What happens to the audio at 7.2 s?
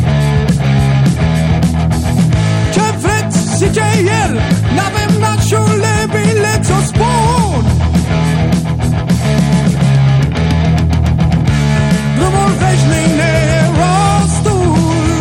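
At 7.2 s the audio is hard clipping, as it does for the whole clip. The signal is driven about 5 dB past what the stage can pass, so its peaks are sliced flat. Only a small share of samples, a few percent, hit the ceiling. Those squared-off tops add harmonics high in the spectrum. The result is a crackle and brief harsh edge on the louder moments, rather than a constant fuzz.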